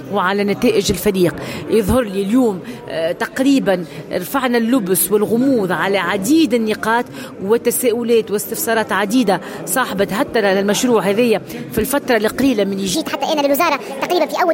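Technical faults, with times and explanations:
12.95–14.53 s, section at the wrong speed: the closing stretch runs 1.44 times too fast, so pitch rises about seven semitones as tempo hurries, both shifting at once. This is likely playback or editing against a mismatched clock, stretching nothing and simply reading samples faster.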